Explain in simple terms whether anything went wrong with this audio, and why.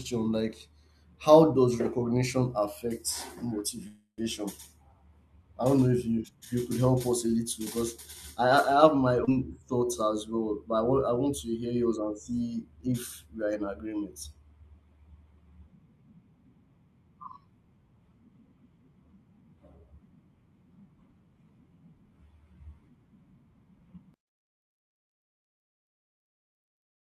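A call audio freeze happens at 3.87 to 4.23 s. The speech stalls and the last sound is stretched into a fading hum for about 0.3 s, ending in a short silence, then carries on exactly where it stopped. Nothing is lost. Delayed network packets likely emptied the playback reserve.

A skip ahead comes at 9.25 s, right after "have my". Playback jumps forward with almost no gap, and roughly a fifth of a second of speech is simply gone. The sounds on either side of the jump are stitched together almost directly.

A jitter buffer slow-down follows from 9.60 to 9.98 s. To rebuild its reserve of audio, the receiver repeats tiny slices of the sound, so the speech runs at about 87% speed and sounds slightly drawn out while the pitch stays unchanged.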